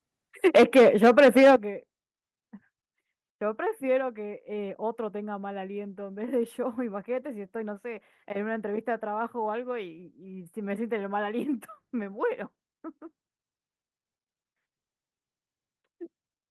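Likely set with its input volume too high, the microphone overloads from 0.45 to 1.56 s, peaks pushing about 8 dB past the converter's limit. Around a tenth of the samples get flattened, giving the loudest speech a harsh crackle. Microphone volume stepped down twice, likely the call software reacting to the clipping: a drop of about 3 dB at 0.57 s, then about 10 dB at 1.56 s. Both times speech and background fall together.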